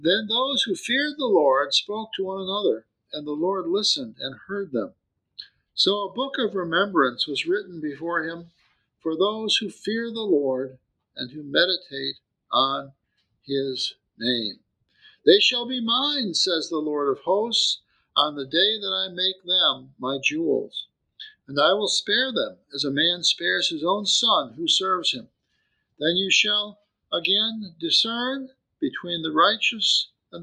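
Sound cut by the noise suppressor between 14.57 and 15.01 s: the suppressor misreads part of the audio as noise and pulls it down by as much as about 22 dB, so for roughly 150 ms in total the level sinks.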